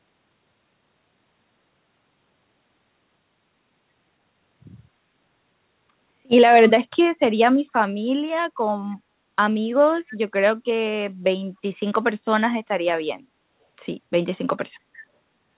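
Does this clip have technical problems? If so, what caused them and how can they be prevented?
Yes. Two brief echo leaks occur, at 8.91 to 8.95 s (very faint, about 40 dB below the speech) and at 10.07 to 10.13 s (about 25 dB below), each a copy delayed by 278 ms. The likely cause is a far-end loudspeaker whose echo canceller let residual pickup return. Using a headset at that end, or tuning its echo canceller, would prevent this.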